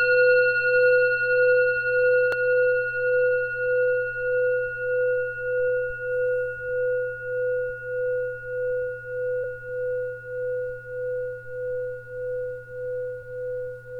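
Damaged data in the compressed stream makes the decoder misread frames and lose sync until it finds the next frame header. Each time, it produces a brief chirp, squawk, click or short hole: at 2.32 s, at 9.43 s, and from 13.21 to 13.23 s.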